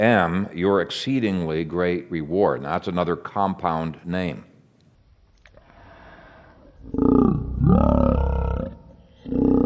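From 4.95 s, right after "that's another compound name", a wrong sample rate takes hold: audio recorded at 44.1 kHz plays at 16 kHz unconverted, so it runs at 0.363 speed and drops about 17.6 semitones, sounding slow and growling. Spectrograms show formants compressed downward and stretched in time.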